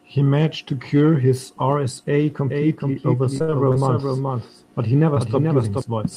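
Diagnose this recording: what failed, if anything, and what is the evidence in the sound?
From 2.49 to 5.81 s a second copy of the speech trails the original by roughly 0.4 s, about 5 dB quieter, dry and full-band, cutting in and out abruptly. This doubled audio track likely comes from a monitoring or capture path recording the same signal twice, out of step.

Between 3.23 and 3.76 s the speech turns choppy and robotic, with five dropouts, the longest 62 ms, covering about a quarter of that stretch. This repeated packet loss points to the network: the decoder kept extending the last sound to bridge each missing packet.

At 5.14 to 5.18 s there is a brief smear where about 20 ms of audio is missing. This is short concealed packet loss on the network path: the decoder filled the hole by continuing the preceding sound, then blended back into the received audio.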